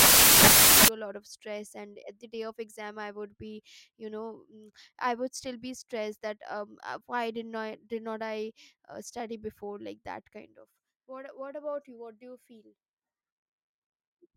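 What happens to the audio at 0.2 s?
The reader assembles each sample from the wrong bytes, so low bits dominate from 0.0 to 0.88 s, turning the speech into loud, harsh broadband noise, close to white on the louder sounds.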